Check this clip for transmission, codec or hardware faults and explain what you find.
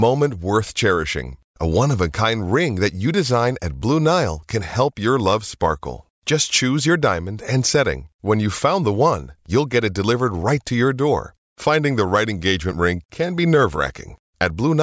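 Nothing here points to a transmission, codec or hardware problem; the speech comes through steady and intact, with nothing to flag.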